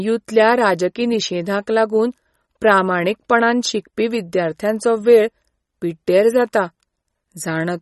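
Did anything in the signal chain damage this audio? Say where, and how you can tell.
Yes, the damage is at the codec stage, most likely MP3 compression, and it runs through the whole speech clip. Nothing sounds above 11.8 kHz, and the remaining band is plainly watery and swirly, with metallic chirps on sibilants. A simple low-pass filter or resampler would leave a dull but clean signal. Here the encoder ran short of bits, cutting the treble and dropping weak spectral lines frame by frame, which fits a bitrate near 33 kbps.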